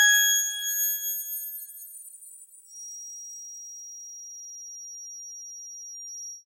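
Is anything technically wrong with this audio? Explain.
Yes. From 2.64 s to the end, a feedback whistle runs about 15 dB below the sound as a thin 5.7 kHz tone that swells and fades slowly in level. The likely cause is a loudspeaker-to-microphone loop held just short of runaway, so one frequency keeps ringing. A spectrogram shows it as a single steady horizontal line, while the waveform barely changes.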